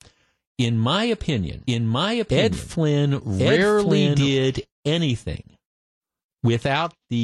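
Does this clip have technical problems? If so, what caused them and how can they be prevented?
Yes. A doubled audio track runs from 1.67 to 4.29 s. A second full-band copy of the speech trails about a second behind, at roughly the same level. It has no decay and cuts in and out abruptly. The likely cause is the audio being captured twice, once through a slower path, or an edit leaving two offset copies. To prevent it, route the source through one capture path only and check edits for overlapping duplicate regions.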